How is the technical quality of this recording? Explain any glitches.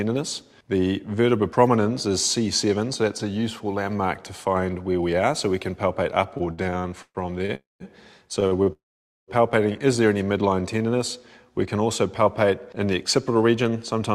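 The recording suffers from network delivery problems in its second half, with the sound repeatedly held, stopped, then slowed and hurried, though almost nothing appears to be lost.

Repeated stalls (stutter), 6.37 to 7.52 s: the sound catches ten times, the longest hold about 123 ms, so roughly 333 ms, or 29% of that stretch, is filled-in continuation. The jitter buffer kept running dry as packets trickled in late. Unlike a single freeze, this is a choppy, dragging judder.

Call audio freeze, 7.55 to 7.83 s and 8.72 to 9.31 s: the last sound is carried on briefly and fades, leaving about 180 ms of silence in the first case and about 490 ms in the second. Each likely comes from a held-up run of packets emptying the buffer. The sound resumes where it stopped, and the long fade to silence sets it apart from the brief stalls.

Short stall from a late packet, 8.47 to 8.54 s and 8.63 to 8.69 s: one sound is stretched for about 42 ms, then about 31 ms, with a faint buzz or dip, while the receiver waits for one missing packet. 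These are single isolated holds, far shorter than a freeze and without its silent gap.

Jitter buffer slow-down, 10.55 to 10.97 s: the audio plays at about 89% speed, with 56 ms added by repeating pitch periods to rebuild the buffer's reserve. The pitch stays the same but the sounds are drawn out, a smooth drag rather than a stop.

Jitter buffer speed-up, 13.30 to 14.14 s: the audio runs at about 112% speed as the receiver trims tiny pitch-period pieces, about a tenth of a second in all, to shed excess delay. It sounds hurried at unchanged pitch, the mirror image of the slow-down.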